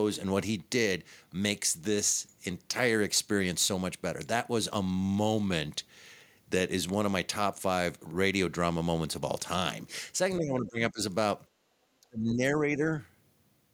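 From 10.38 to 11.0 s the speech dips by roughly 15 dB, and from 12.0 to 12.94 s it sinks much further, around 30 dB. This is speech suppressed in double talk, likely an echo canceller pulling down the talker along with the far-end echo. Between these, from 11.5 to 11.63 s, the room background ducks by about 7 dB, background gated by the echo canceller as it clamped the microphone during loudspeaker playback.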